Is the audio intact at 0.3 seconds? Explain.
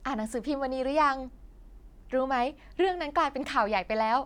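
Yes, the speech at 0.3 seconds plays through intact, with no audible dropout, click, distortion or other technical fault at that moment.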